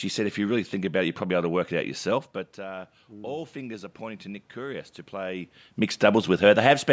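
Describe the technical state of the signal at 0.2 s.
At 0.2 s the speech signal is intact, with only the ordinary band limit of call microphone processing, nothing above 8 kHz, and the background room noise present.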